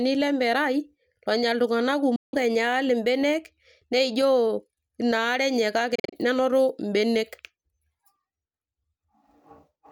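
At 2.16 s the speech cuts out for about 0.2 s, then again from 5.95 s to 6.17 s as a broken patch of short gaps, the longest about 40 ms. It picks up later each time as if it never stopped. That's likely a Bluetooth dropout, where late packets were discarded.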